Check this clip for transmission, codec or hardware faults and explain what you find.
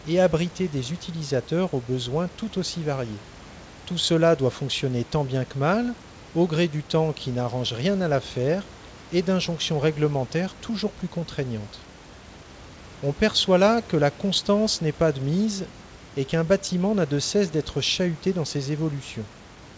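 No transmission, codec or hardware faults detected here.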